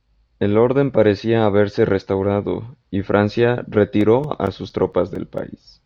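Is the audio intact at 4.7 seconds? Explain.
No. CD scratch ticks run from 4.01 to 5.38 s: seven short ticks, the longest only a few milliseconds. A blemish on the disc destroys more data than error correction can rebuild on each rotation, so the player interpolates or mutes those samples, leaving regular clicks in the speech.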